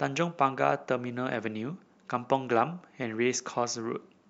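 Speech with a regular click recurring about every 1.07 s from 0.88 s to 4.10 s, roughly four in all. These are likely clock drift buffer slips: two mismatched clocks, off by a few hundred ppm, force a small block of samples to be dropped or repeated at each slip.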